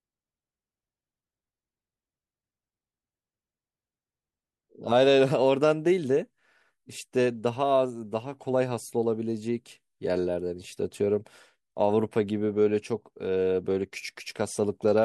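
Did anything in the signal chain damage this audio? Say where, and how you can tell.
No, nothing in the chain damaged this speech.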